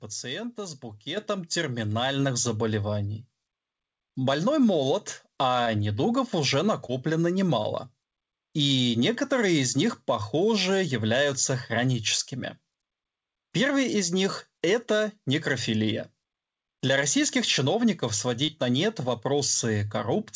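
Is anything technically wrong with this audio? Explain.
Yes, there are two kinds of fault in this speech.

Microphone volume stepped up, at 1.17 s: the call software judged the input too quiet and raised the microphone gain in a single jump of about 7 dB. Speech and background noise both become abruptly louder at that instant rather than rising gradually.

Short concealed packet loss, at 5.64–5.68 s (just before "недугов уже"), 6.86–6.93 s (just after "недугов уже"), 7.62–7.66 s and 18.46–18.50 s (between "российских чиновников" and "на нет"): each time about 20 ms of audio arrived too late to decode. The receiver patched the gap by extending the preceding sound and then crossfading back, which is heard as a brief smear or wobble.

The audio also carries nothing above 8 kHz, which fits a wideband call codec such as G.722.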